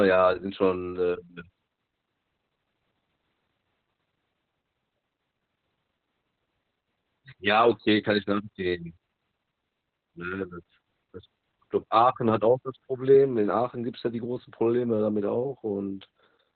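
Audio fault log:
Throughout: Opus voice compression. The speech is narrowband, with nothing above 4.5 kHz. It sounds hoarse and faintly robotic from coarsely coded linear-prediction excitation, which fits the SILK coder at around 8 kbps. A plain low-pass filter would muffle the sound without this rasp.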